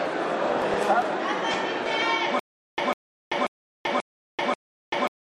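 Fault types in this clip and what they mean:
Stutter with silent gaps: From 2.39 s to the end, a 150 ms burst repeats every 536 ms with 385 ms of silence between, likely a stalled stream.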